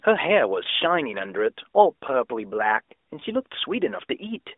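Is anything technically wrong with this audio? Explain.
Yes. There are two brief glitches from lost AMR speech frames, at 0.64 to 0.68 s and again at 3.20 to 3.25 s. Each sounds like a quick dip or warble before the speech settles back in. Each fits a single missing 20 ms frame. The frame failed its checksum, so the AMR decoder filled the gap by reusing the last good pitch and vocal-tract settings at reduced gain. The line itself has the narrowband sound of the AMR narrowband mobile codec, passing roughly 300 Hz to 3.6 kHz.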